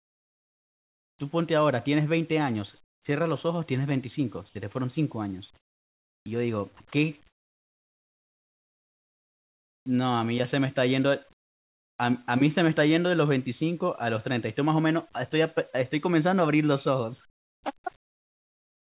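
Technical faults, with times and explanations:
0.0–1.19 s, 2.84–3.05 s, 5.57–6.26 s, 11.33–11.99 s, 17.3–18.93 s: comfort noise in place of the background. Pauses become steady, featureless hiss, about 11 to 27 dB quieter, likely from discontinuous transmission. On a spectrogram, detailed background gives way to flat, uniform texture below 4 kHz.
6.77–9.86 s: sound chopped by the voice detector. Quiet syllable edges drop into synthetic fill, likely from the detector repeatedly toggling. The waveform shows abrupt gaps.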